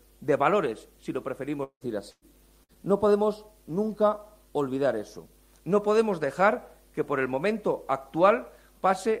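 Between 1.63 and 1.84 s the audio turns into a fading buzz or hiss, then about 80 ms of silence, and skips roughly 180 ms, likely a long network dropout; the longer silent tail sets it apart from the briefer faults that follow. At 2.11–2.25 s and 2.64–2.83 s, bursts of packet loss cut about 120 ms and 60 ms, covered by shorter held, fading sound.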